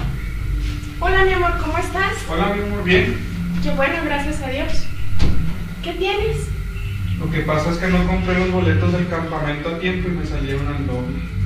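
The signal was likely reduced to a very low bit depth without dither, with each sample simply rounded, which fits an 8-bit path. From 0.0 to 8.02 s this leaves grainy distortion that tracks the sound, roughly 35 dB below it, harshest as the level falls.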